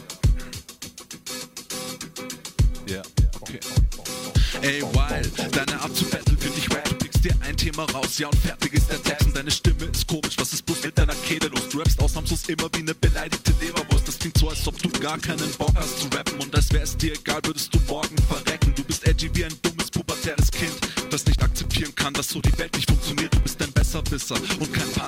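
From 20.17 s to about 24.97 s the audio picks up a steady ticking, and that's periodic USB or driver dropouts. Every 64 ms, roughly fifteen times a second, something stalls the USB bus or the audio driver, and a couple of milliseconds of signal drop out to silence. That makes around seventy tiny gaps, evenly spaced, and each one is heard as a little click that only shows up where there's sound underneath.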